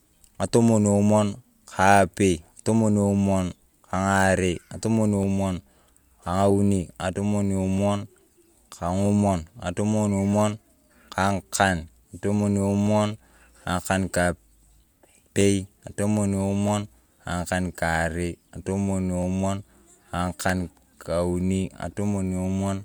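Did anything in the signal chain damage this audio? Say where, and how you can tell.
Yes: the speech clicks every 1.27 s from 0.15 to 21.77 s, likely clock drift buffer slips between two clocks a few hundred ppm apart.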